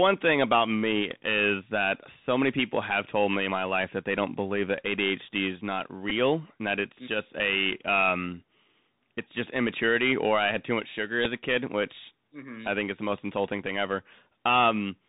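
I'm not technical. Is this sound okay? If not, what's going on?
No. The whole recording went through a Bluetooth CVSD headset codec, the old phone-call link, so everything above about 4 kHz is gone. The voice sounds muffled, with scratchy s sounds and a grainy hiss underneath.

There are also two Bluetooth headset packet repeats, where the link dropped a few milliseconds and replayed the last packet. You'll hear a brief buzz at 6.10 s, right after "is not", and another at 11.25 s, just after "had too much sugar".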